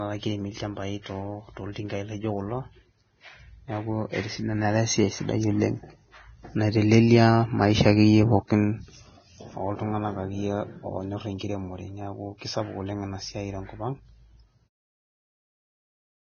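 Throughout, the speech sounds hissy and grainy with nothing above 6.5 kHz, likely heavy Vorbis compression at a bitrate near 18 kbps; unlike broadband noise, the hiss follows the signal. From 1.72 to 1.76 s and again from 8.47 to 8.50 s, pre-echo puts a brief hiss of about 30 ms just before a sharp attack, because codec noise spreads back across the block. Unlike a click, it has no hard edge. The smooth fade-out ending at 14.7 s is clean.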